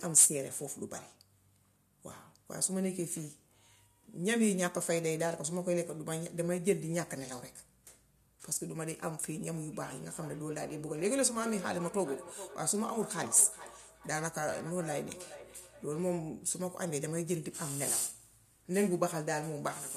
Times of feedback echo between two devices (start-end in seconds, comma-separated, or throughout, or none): 9.73-16.23